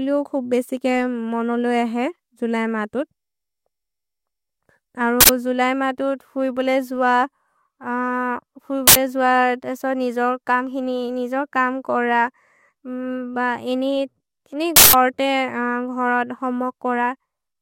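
This is speech, broken three times by an uninitialised buffer. Each time, a block plays out before any audio has been written into it, so stale memory is heard as a harsh, loud burst of digital noise. Bursts land at 5.21 to 5.29 s, just before "जुलय् मातु फुइ बोले", and at 8.88 to 8.96 s, each about 85 ms long, which fits a 4096-sample block. The third, at 14.76 to 14.93 s, right after "इनि इनि", lasts about 170 ms, which fits an 8192-sample block.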